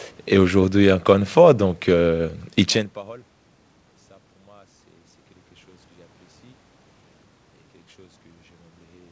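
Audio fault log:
No faults detected.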